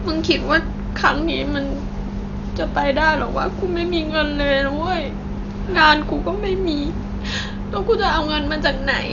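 Throughout the speech, the likely cause is Dolby Digital compression fitting a 48 kbps stream: the encoder narrowed the band and left many frequency lines without bits, so nothing reaches above 7 kHz, and the sound is dull, with heavy, rough fluttering noise around tones.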